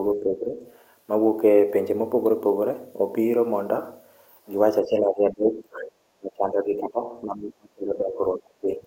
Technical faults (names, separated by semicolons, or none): speech suppressed in double talk